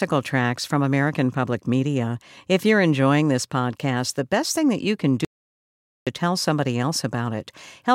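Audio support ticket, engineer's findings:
Audio dropout to silence, 5.25–6.07 s, after "thing that you can": waveform flat, blank spectrogram, no room tone. Likely input lost, recorder wrote silence.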